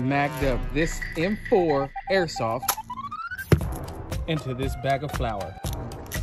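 The audio signal stays technically intact throughout, with nothing in it that points to a problem anywhere along the chain.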